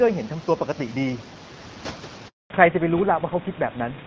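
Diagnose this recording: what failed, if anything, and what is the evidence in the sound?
Network stage, handover gap: at 2.28 s the speech stops within a few tens of milliseconds and stays silent until 2.50 s, a 220 ms hole. No speech frames arrived while the call switched networks. Unlike a dropout, there is no click or concealment.

Codec stage, fallback to narrowband: from 2.50 s to the end, nothing remains above 4 kHz, and the speech sounds duller and rougher. The call left HD Voice for an older narrowband codec. A fixed 4 kHz ceiling that begins right after the gap points to a codec switch rather than a filter.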